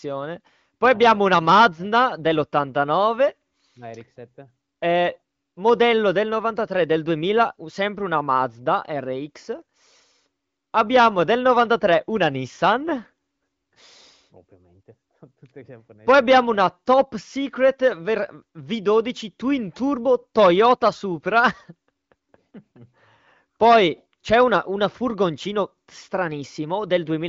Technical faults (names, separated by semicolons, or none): none